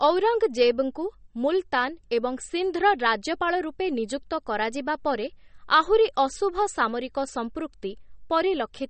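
All the way through, the speech has a hard treble ceiling at 8.4 kHz with watery, swirly smearing, likely MP3 compression starved of bits, which fits roughly 32 kbps.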